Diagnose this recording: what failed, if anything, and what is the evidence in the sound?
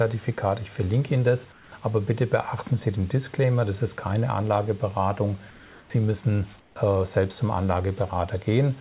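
Discontinuous transmission in call processing likely cut in: comfort noise in place of the background at 1.52–1.72, 5.5–5.9 and 6.6–6.76 s, flat, featureless and about 2–8 dB quieter.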